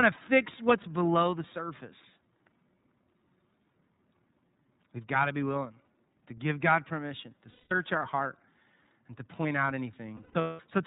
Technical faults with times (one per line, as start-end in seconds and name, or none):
0.00-10.87 iLBC codec
7.50-7.72 lost iLBC frames
10.17-10.60 lost iLBC frames